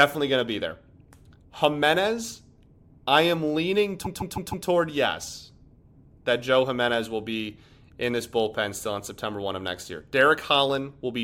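From 4.04 to 4.66 s the speech stutters: repeated frames cause a 156.7 ms block to play four extra times, which fits a run of six compressed frames being sent again. The decoder repeats the same audio, adding 626.9 ms to the clip.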